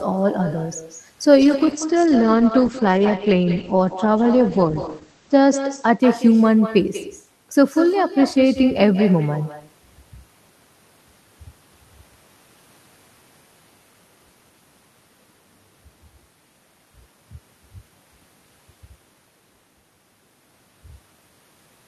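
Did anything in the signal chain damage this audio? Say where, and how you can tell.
Yes. At the call-processing stage, echo with no canceller runs throughout: a thinner copy about 12 dB down trails every phrase by roughly a fifth of a second.

At the codec, a call bitrate drop from 1.43 to 6.47 s cuts the bandwidth from 20 kHz to 8 kHz and coarsens the sound, which fits a fall from 32 to 10 kbps.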